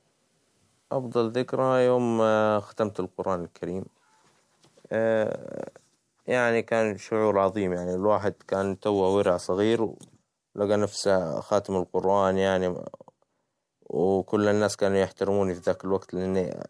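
Aliasing runs through the whole clip. The audio was resampled to a lower rate without a proper low-pass filter first, and the fold point at 11 kHz fits a drop from 44.1 kHz to about 22 kHz. Speech energy above 11 kHz reflects back down as unrelated, inharmonic tones, roughly 35 dB below the signal. Sibilants sound gritty and metallic, and the spectrum stays full right up to the 11 kHz edge instead of rolling off.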